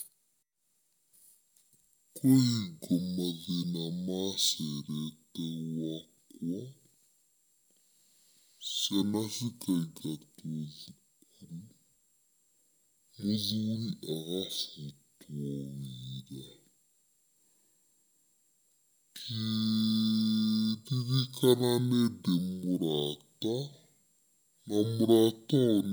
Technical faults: stereo read as mono

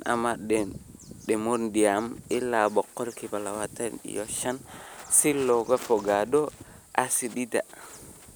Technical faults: none

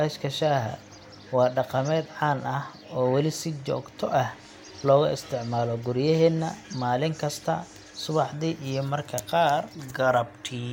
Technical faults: none

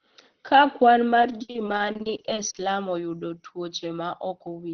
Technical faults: repeated packet loss (robotic sound)

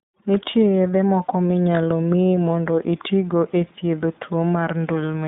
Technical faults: iLBC codec

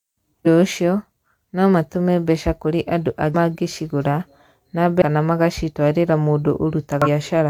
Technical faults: damaged data in a compressed stream

